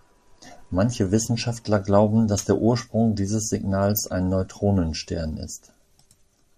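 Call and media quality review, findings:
MP2 compression, whole clip. Speech dull, upper bands missing, granular gurgle on remaining bands. Likely MP2 encoder at low rate, consistent with about 80 kbps. Too few bits per sub-band; top bands dropped, rest coarsely quantised.

DAB burbling, 3.90–4.03 s. Brief burst of noise blips in single sub-bands. Probable component: DAB receiver path under weak reception. About 0.2% residual bit error rate passing error correction, corrupting samples across a run of frames.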